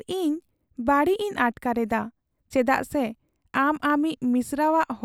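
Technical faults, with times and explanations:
No technical faults can be heard in this speech recording. Nothing in the sound points to a problem anywhere in the clip.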